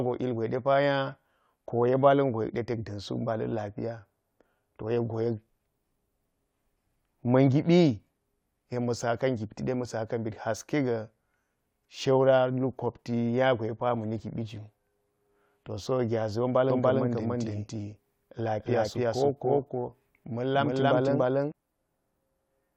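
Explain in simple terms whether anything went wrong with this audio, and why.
From 16.70 to 21.52 s, the speech is heard twice: a second, equally loud copy trails about a third of a second behind, with no echo fade, and cuts in and out abruptly. This doubled audio track likely comes from the same sound being captured again through a slower path.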